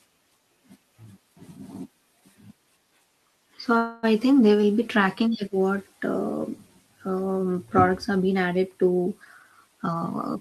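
At 3.77 to 4.05 s, just before "I think they will", a call audio freeze extends the last sound as a fading buzz; likely delayed packets emptied the jitter buffer, inserting about 256 ms of gap. After "have been added to", from 9.24 to 10.36 s, a jitter buffer speed-up trims pitch periods, running the speech at 115% at unchanged pitch and removing roughly a fifth of a second.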